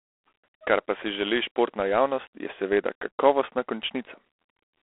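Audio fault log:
Throughout: G.726 ADPCM. The speech carries a harsh, rasping hiss that rises and falls with its level, and nothing sounds above 3.8 kHz. The coarse difference coding behind that grit fits 24 kbit/s, inside a 300 to 3400 Hz telephone band.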